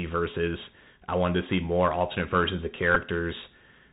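Throughout the speech, the Bluetooth CVSD headset codec is plainly audible. Its one-bit delta coding at 64 kbps steps the waveform up or down with an adaptive step size, so nothing above 4 kHz survives, sibilants turn scratchy, and a granular hiss sits under the voice.

At 2.95 s, a Bluetooth headset packet repeated fault appears. Lost voice packets were replaced by replaying the previous packet's bits for about 11.2 ms, which fits three 3.75 ms packets. The repetition produces a brief buzzy tick rather than a sustained tone.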